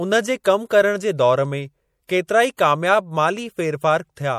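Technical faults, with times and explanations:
throughout, MP3 compression: plainly audible watery, swirling texture as weak frequency lines drop in and out between frames, with treble cut above 20.6 kHz. This likely comes from lossy encoding at a low bitrate around 64 kbps. Unlike pre-echo, it persists across the whole clip rather than clustering before attacks.
0.44, 2.07, 2.27–2.29, 2.57 s, pre-echo: a brief hiss of about 13 to 20 ms leads each sharp onset, the first just before "कम करण जे". The codec spreads its block's quantisation noise into the quiet moment preceding the attack, so the hiss comes before the onset rather than after it.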